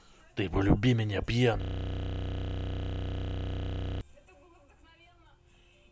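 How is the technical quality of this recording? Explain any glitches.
The recording has one serious glitch: a system hang loop from 1.62 s to 4.01 s. The playback path froze while the sound hardware kept replaying its last 32 ms buffer, which fits a 512-sample buffer, about 75 times. Because the piece is so short, the speech gives way to a steady buzz at roughly 31 Hz. A waveform would show one identical short pattern tiled across that span, and a spectrogram would show fixed vertical striping with unchanging harmonics spaced about 31 Hz apart.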